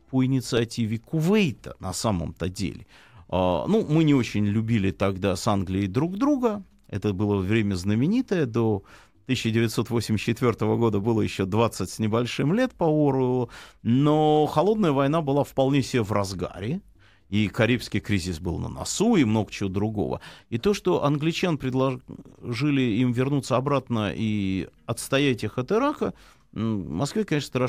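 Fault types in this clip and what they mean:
No faults detected on this speech clip.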